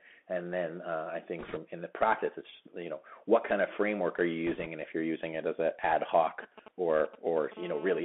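The whole clip is speech squeezed through the Bluetooth CVSD headset codec, which fits a 64 kbit/s one-bit stream. Everything sits in a narrow band from roughly 200 Hz to 3.4 kHz. The adaptive step can't keep up with loud, bright bits, so sibilants go scratchy over a grainy hiss.

From 1.39 to 1.58 s, between "then uh I" and "in the practice it's", you get bit errors on the Bluetooth voice link at a few percent. That's a rushing crackle rather than clicks, because every flipped bit carries the same small weight. It comes back, lighter at roughly half that rate, from 4.47 to 4.67 s, after "of framework are you" and before "and if you're using".

After "it as an ad", from 6.43 to 7.54 s, there are GSM signalling bursts. A nearby 2G phone is handshaking, and the circuit rectifies its radio bursts into galloping dit-dit-dit ticks and short 217 Hz buzzes, around 15 dB under the speech.

Then from 7.57 to 8.00 s it settles into steady GSM phone buzz, the call-state version. 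It's a hard, raspy 217 Hz drone full of harmonics, about 16 dB below the speech.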